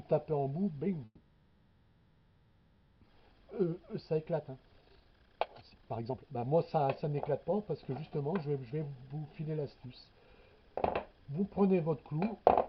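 A call audio freeze runs from 1.05 to 3.03 s. The likely cause is packets stalling in transit until the jitter buffer emptied. The receiver stretched the last sound into a fading buzz or hiss for almost 2 seconds, with a brief drop to silence, then resumed exactly where it stopped, losing nothing.

A jitter buffer speed-up follows from 3.21 to 9.17 s. With the late audio backed up, the receiver trimmed short pitch-period slices again and again, roughly two seconds in total, so the sound plays at about 133% speed without any change in pitch and comes across hurried.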